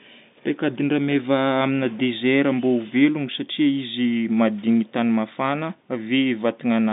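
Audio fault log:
No faults are heard in this speech clip. The telephone coding is working as expected, with the sound limited to a line band of about 150 Hz to 3.7 kHz, as a G.711 A-law connection would give.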